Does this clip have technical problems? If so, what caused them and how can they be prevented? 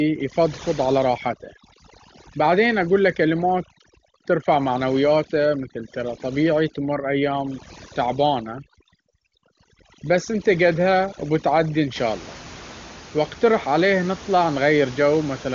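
Yes. Overdone noise removal runs from 0.0 to 11.96 s. A noise reducer set too aggressively is pushing individual frequency bands far down or out whenever they sit close to its noise estimate, and the quieter parts of the speech fall below that line too. Against a room noise floor about 17 dB under the speech, this leaves a background that drops and breaks up into twinkling artefacts. To prevent it, lower the reduction amount or raise its threshold so that only the steady room noise is attenuated and the speech bands stay intact.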